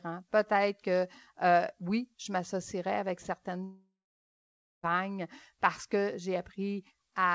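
From 3.64 to 4.86 s the speech decays into a fading buzz, then near-silence, resuming with about 1.2 s skipped, likely a long network dropout.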